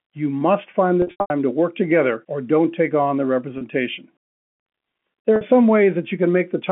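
Packet loss with pitch repetition hits at 1.02 to 1.30 s, 3.58 s and 5.36 s: the receiver loops the last pitch period across each gap, so short drops sound held and buzzy, while the longest 90 ms run in the first fades toward silence.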